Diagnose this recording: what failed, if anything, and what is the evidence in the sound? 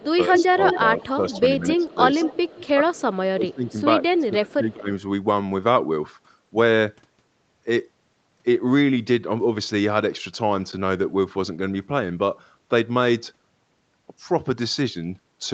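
The speech dips and thins in pieces at 0.0–0.54 s, 1.16–1.98 s, 2.71–3.75 s and 4.18–4.9 s, dropping by about 10 dB at first and about 20 dB later. This is likely speech suppressed in double talk: the call-processing echo canceller, facing both sides at once, attenuated the near talker along with the echo.

A delayed copy of the speech trails it by 184 ms at 0.12–1.85 s, nearly as loud as the speech itself, then fainter at 2.19–2.68 s (about 15 dB down) and 4.07–4.54 s (about 30 dB down). This is likely an echo leak: a far-end loudspeaker's sound reached the microphone and was only partly cancelled before being sent back.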